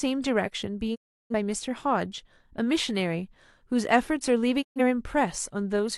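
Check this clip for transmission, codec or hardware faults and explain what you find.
Two faults of one kind are present in the speech. The sound fades out over about 20 ms and falls silent from 0.94 to 1.34 s, then again from 4.61 to 4.81 s. These are digital broadcast dropouts: the receiver muted when frames went missing or failed checking, losing about 341 ms and 128 ms of programme. Those lengths fit several whole frames lost each time.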